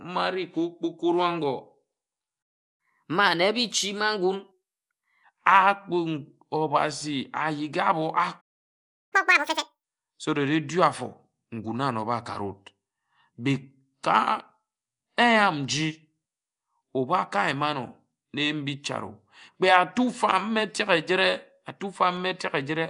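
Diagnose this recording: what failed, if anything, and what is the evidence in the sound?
Codec stage: Nellymoser compression throughout, likely from the Nellymoser Asao encoder. The speech carries a rough, hissy halo and an underwater smear, which fits a rate around 44 kbps. Noise-filled bands give a hiss-halo that simple band-limiting lacks.

Playback stage: a playback stall at 2.42 to 2.80 s, about 0.36 s, and another at 8.40 to 9.13 s, about 0.71 s. The output drops to silence mid-flow, likely because the player ran short of data. The resumed catch-up distinguishes it from a network dropout.

Playback stage: catch-up at higher speed after each stall. From 2.80 to 5.24 s the audio runs at 1.15 times speed, pitch up about two semitones. From 9.13 to 9.84 s it runs at double speed, roughly ten semitones up. Rising pitch separates resampled catch-up from time-stretching.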